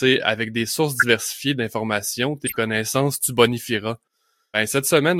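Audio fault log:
0.93–1.05 s and 2.46–2.57 s: corrupt frame decoded. Damaged compressed frames were played anyway, so energy lands at wrong frequencies, giving short noisy chirps spanning a handful of frames. The first is about 10 dB stronger and the second is quieter.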